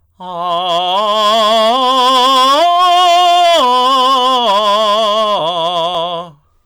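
From start to finish the music is hit by hard clipping. The signal reaches the converter or gain stage about 9 dB hotter than it can pass, so every peak is sliced flat, on the order of a tenth of all samples. Those squared-off tops spray harmonics high into the spectrum, giving a harsh, buzzy fuzz on every loud passage. Unlike gentle tape or valve saturation, the edge is abrupt and brittle rather than warm and rounded.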